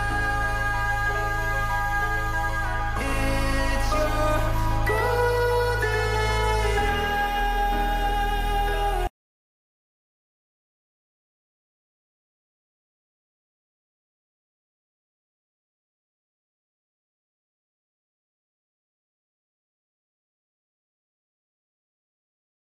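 From about 2.98 s to 7.40 s there's a doubled audio track: a second copy of the sound trails around a tenth of a second behind, roughly 5 dB down, with no room tail, snapping on and off. Likely a slower second capture path.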